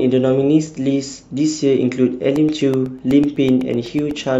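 From 2.24 s to 4.24 s, periodic USB or driver dropouts occur: something blocks the audio path every 0.125 s, and about a millisecond of speech is replaced by silence each time. The result is about fifteen evenly spaced ticks, eight per second, riding on the signal.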